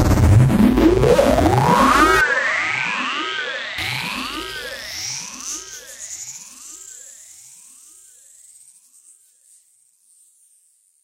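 From 2.21 to 3.78 s the input likely switched to a poorer device, cutting everything above 8.3 kHz and dropping the level by about 10 dB, with a faint new noise floor.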